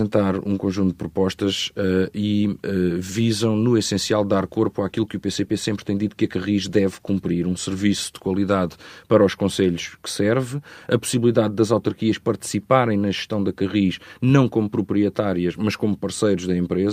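Nothing technical stands out in this speech recording; there's no fault to point to anywhere in it.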